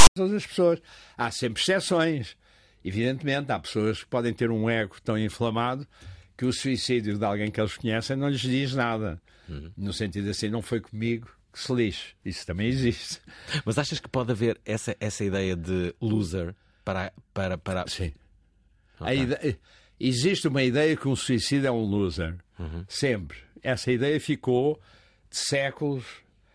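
At 0.00 to 0.16 s the clip opens with file tags played as audio: a metadata block decoded as samples. Its text bytes produce a loud, one-sided rasp with abrupt edges, and the zero padding that follows drops to dead silence before the speech begins.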